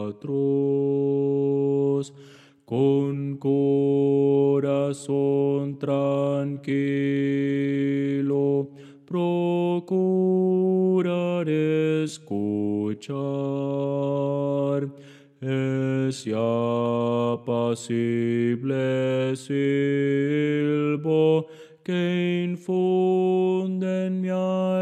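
From 0.0 to 2.0 s the sound is dull and heavily coded, with thin or synthetic-sounding treble: an adaptive stream starting at a low bitrate, consistent with HE-AAC near 40 kbit/s. At 2.0 s it steps up abruptly, with no gap, to fuller quality suggesting AAC-LC near 96 kbit/s.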